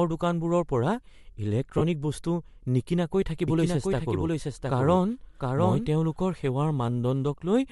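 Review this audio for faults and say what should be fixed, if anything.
The audio was most likely carried over a Bluetooth LE Audio link with LC3 compression. Its encoder works in short transform frames, and at a modest bitrate it discards much of the upper spectrum and refills it with shaped noise. Throughout the clip the speech has a breathy, grainy edge, which fits 7.5 ms frames at about 48 kbps. The damage is plainly audible. To prevent it, record over a wired or higher-bitrate path.

Lost LE Audio frames occur between 1.78 and 1.82 s, just before "বস্তু নিকিনাকৈ". When packets fail to arrive, the LC3 decoder conceals the gap by repeating the last spectrum with randomised signs. Here the speech briefly turns into a noisy, smeared burst instead of clean sound. The length suits roughly four lost frames, about 30 ms of audio. To prevent it, improve radio conditions or keep devices closer so fewer packets drop.

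A doubled audio track runs from 3.48 to 6.24 s, starting after "বস্তু নিকিনাকৈ". It is likely caused by a second capture path, or by an edit that left two copies misaligned. A full-band copy of the speech trails the original by about 0.7 s and sits a few dB quieter. It has no reverberant tail or room colouring, and it starts and stops abruptly, so it sounds like overlapping repetition. To prevent it, make sure only one input feeds the mix and check edits for duplicated regions.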